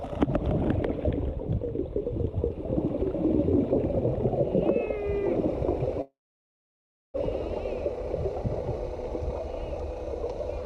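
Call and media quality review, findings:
Call audio freeze, 6.01 to 7.17 s. Sound stops and a short fading buzz carries the last sound, then about 1 s of silence. Playback resumes exactly where it left off. Nothing lost, but everything after runs about 1.1 s late. Likely a jitter buffer underrun after packets stalled in transit. The receiver concealed the gap, then simply waited. Audio above about 12 kHz is absent throughout, consistent with an Opus call path.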